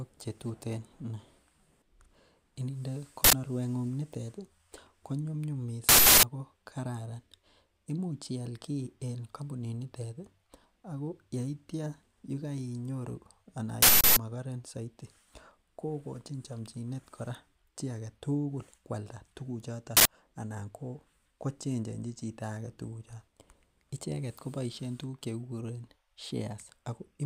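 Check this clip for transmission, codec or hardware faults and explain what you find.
The clip has one fault, an uninitialised buffer, heard four times. Harsh bursts of loud digital noise cut through the speech at 3.24–3.33 s, 5.89–6.23 s, 13.82–14.17 s and 19.97–20.05 s. Each time, a buffer was played before any audio was written to it. Leftover memory came out as samples. The short bursts last about 85 ms, which fits a 4096-sample buffer. The longer ones last about 341 ms, pointing to a 16384-sample buffer.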